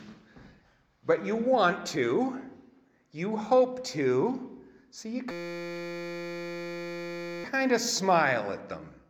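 At 0.58 to 0.64 s and again at 1.86 s, compressed frames are skipped: whole frames missing or rejected by the decoder, so playback jumps ahead by roughly 70 ms and then about 20 ms.

From 5.31 to 7.44 s a system hang loop takes over. The system stalled while the hardware kept replaying one 5.8 ms buffer, which fits a 256-sample buffer, producing a steady 172 Hz buzz for over two seconds.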